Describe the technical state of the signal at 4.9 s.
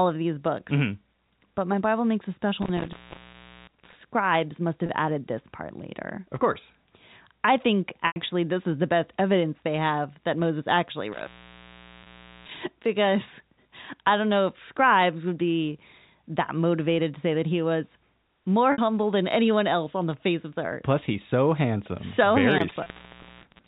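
At 4.9 s the sound briefly sticks: from 4.86 to 4.89 s a single pitch cycle seems to hang, giving a faintly buzzy, held quality before the signal moves on. This is packet loss with pitch repetition. About 30 ms of audio went missing, which fits one dropped packet, and the receiver filled the hole by looping the last pitch period. The loss is too short for the repeat to fade into silence, so only that smeared buzz is audible within the band-limited G.711 telephone sound.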